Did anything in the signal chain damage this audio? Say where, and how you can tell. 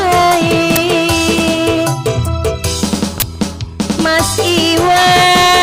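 Yes. Two short, loud bursts of digital noise cut through the sound, one at 0.76 s and a longer one from 3.20 to 3.22 s. This is an uninitialised buffer fault at the driver or buffer stage. Buffers were sent to playback before any audio was written into them, so leftover memory was read as samples. The first burst lasts about 11 ms, which fits a 512-sample buffer, and the second about 21 ms, which fits a 1024-sample buffer.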